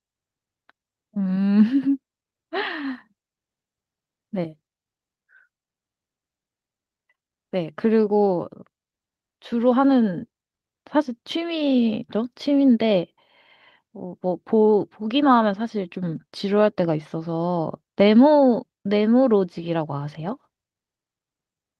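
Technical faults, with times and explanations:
No technical faults detected.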